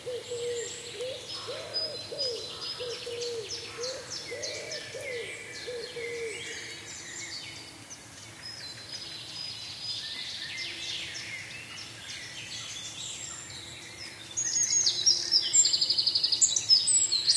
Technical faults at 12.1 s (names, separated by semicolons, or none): none